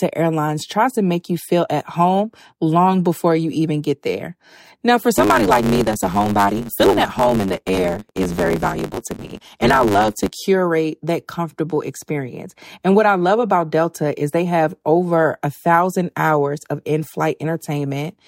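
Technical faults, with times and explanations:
5.14 to 10.32 s, block size mismatch (truncated): The speech runs 1.16 times too fast, but its pitch stays close to normal. A buzz at 100 Hz sits underneath. One stage writes longer blocks than the next stage reads, so the end of every block is lost. Each cut comes once per block, and that repeat is the buzz. The skipped tails shorten the timing without shifting pitch. The speed-up fits 512-sample written blocks.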